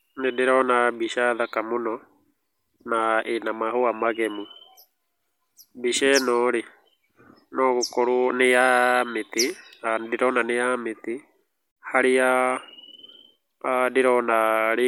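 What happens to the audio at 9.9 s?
Nothing goes wrong at 9.9 s: the speech carries on intact through that moment, with no dropout, click, distortion or other fault.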